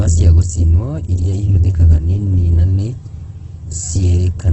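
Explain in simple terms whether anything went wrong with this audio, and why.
Something did go wrong, and it runs through the whole clip, start to finish. The speech sounds grainy and a bit rough, with a fizzy, noisy texture where it should be smooth, and everything above about 8.1 kHz is simply gone, so it lacks sparkle. That combination is the signature of heavy Opus compression, likely squeezed very hard, so the encoder kept the overall shape of the sound but filled in fine detail with noise.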